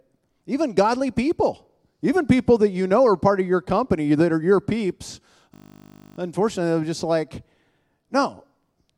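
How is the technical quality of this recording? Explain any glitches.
A single glitch mars the recording: a system hang loop from 5.54 to 6.18 s. The computer or its audio driver stalled while the sound hardware kept replaying the same 20 ms stretch of its ring buffer, about 32 times over. Because the repeated piece is so short, the loop recurs at 50 Hz, so the speech gives way to a steady, mechanical buzz at that rate. Almost no audio appears to be lost once playback recovers.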